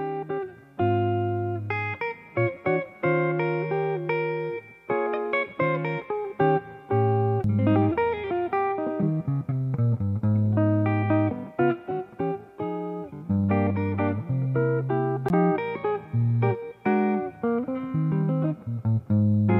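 The audio has two CD skips, at 7.44 s and 15.29 s, each a brief mute of under 20 ms followed by a tick as playback resumes elsewhere on the disc's spiral. On a waveform each shows a tiny flat gap and an abrupt discontinuity, and on a spectrogram a thin vertical broadband line.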